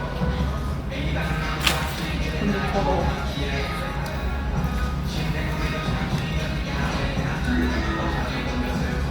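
A recording of everyday sounds, with no technical faults to report. Nothing heard in it calls for a time or a cause to be given.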